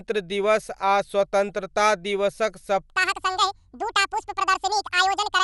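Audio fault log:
Throughout: Dolby Digital compression, likely. Nothing sounds above 11.4 kHz, so the speech is dull, with a rough, fluttering grain. This fits a low bitrate near 64 kbps, where the encoder narrows the band and starves many frequency lines of bits, leaving dither noise in their place.
2.97 to 5.43 s: section at the wrong speed. After "स्वतन्त्रता दिवसक" the speech runs 1.93 times too fast to the end, rising about ten semitones and sounding high and hurried. It is likely the result of playback on a mismatched clock, which shifts speed and pitch together.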